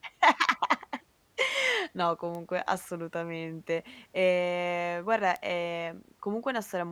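Bit error spikes at 2.35 s and 5.36 s put two sharp, isolated ticks into this speech clip. Each comes from a single corrupted sample: one bit flipped in storage or on a digital link, so the value leaps by a power of two and snaps straight back. That one-sample jump spreads energy across the whole spectrum and bears no relation to the speech. The first peaks at about -24 dBFS; the second is louder, at about -17 dBFS.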